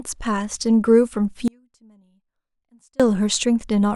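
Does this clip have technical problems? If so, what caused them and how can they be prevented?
Yes. The signal feeding the recording was likely interrupted while everything downstream stayed live, giving an audio dropout to a faint residue from 1.48 to 3.00 s. For about 1.5 s the speech cuts out abruptly, leaving only a faint trace roughly 35 dB below normal level. Secure connectors and cables, and monitor wireless links, to prevent it.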